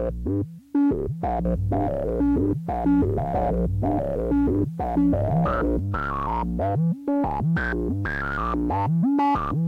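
From 1.45 s to 5.79 s a doubled audio track appears: a full-band copy of the sound trails the original by about one and a half seconds, at roughly equal level, with no decay or room colour. It likely comes from a second, slower capture path. On a spectrogram the same patterns repeat shifted in time, beginning and ending abruptly.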